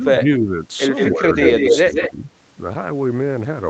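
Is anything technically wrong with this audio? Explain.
Yes, two faults alternate through the speech.

Speech suppressed in double talk at 0.0–0.56, 1.11–1.38, 1.81–1.93 and 2.09–2.25 s: the level dips by about 10 dB (about 20 dB at 1.81 s), likely because an echo canceller ducked both talkers. The waveform envelope shows notches.

Echo leak at 0.95–1.1, 1.34–1.78 and 1.94–2.11 s: a copy trails 174 ms behind, near speech level and then about 5 dB lower, likely from incomplete echo cancellation. The spectrogram shows duplicated, offset harmonics.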